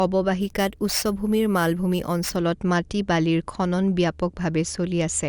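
Speech, with imaging from sample-and-hold upsampling from 0.41 to 2.36 s. A bright metallic fizz about 18 dB below the speech fills 11 to 22 kHz, which fits a 22 kHz to 44.1 kHz rate change made by repeating samples. Unlike steady hiss, it swells and fades with the speech.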